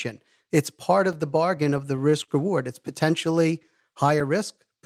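At 1.13 s, a block of digital silence: a run of samples about 2.7 ms long, which fits a 128-sample block, was replaced by zeros. The sound drops to nothing and returns with no fade, so the two edges merge into one short tick.

From 1.57 to 2.67 s come repeated stalls (stutter). Packets arrived late seven times, the jitter buffer ran dry each time, and the receiver stretched the last sound to cover about 108 ms in total, up to 38 ms at once. Nothing is lost, but the audio drags and hiccups.

At 4.20 s the same block of digital silence recurs, another zeroed stretch of about 2.7 ms with hard edges, heard as a single brief tick.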